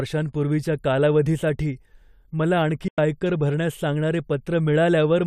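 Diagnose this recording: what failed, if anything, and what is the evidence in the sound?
A digital broadcast dropout at the reception stage: at 2.88 s the speech fades out within 3 ms and stays silent for 96 ms, which fits four failed frames muted by the receiver. The waveform shows a flat gap, and the spectrogram shows a blank vertical band.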